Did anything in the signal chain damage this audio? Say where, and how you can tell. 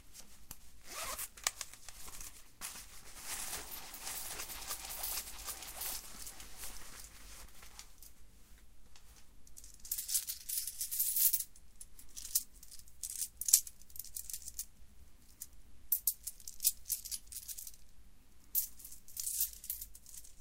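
Yes. From 3.19 s to 7.45 s, the sound is shadowed by a second copy of itself arriving about 0.7 s late and roughly 5 dB quieter. The echo carries the full frequency range with no decay or room tone, and it switches on and off abruptly at those two times. That makes it a doubled audio track rather than acoustic reflection, most likely from the driver or buffer stage capturing the same signal a second time through a slower path.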